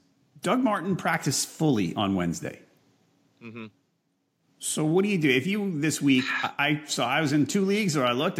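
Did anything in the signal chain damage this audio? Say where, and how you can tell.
No, nothing in the chain from capture to playback has left any audible damage on this speech recording.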